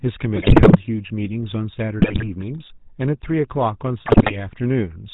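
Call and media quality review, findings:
GSM full-rate codec, whole clip: buzzy, gravelly roughness on the speech, nothing above 4 kHz, codec damage plainly audible. Sounds like the old full-rate coder, which fits 13 kbps. It models the vocal tract and excites it with a sparse regular pulse train, so the detail between pulses is lost and voiced sounds come out rasping.

GSM bit errors, 0.36 to 0.76 s: squawks and gargling bursts. Corrupted filter, pitch and gain parameters warp the spectrum and spike the level frame by frame, which points to a badly degraded link.

GSM bit errors, 2.00 to 2.28 s: shorter burst of the same pops and gargle, still a rough link.

GSM bit errors, 4.06 to 4.35 s: same squawking, highest error rate of the three at about 9.4%.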